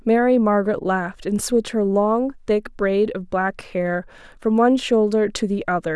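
Nothing in the speech stood out as a problem on listening.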